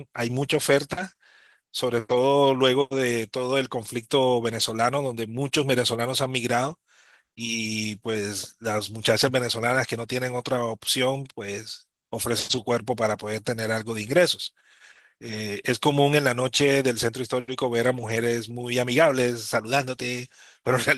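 No faults found; the speech carries only the light, full-band character of hybrid Opus voice coding.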